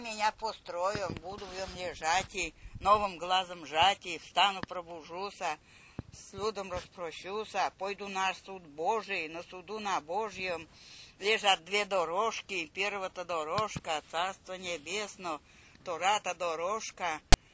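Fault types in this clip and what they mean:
File tags played as audio: at 17.33 s a block of text tag data is read as samples, giving a brief, hard-edged, loud rasp offset toward one side.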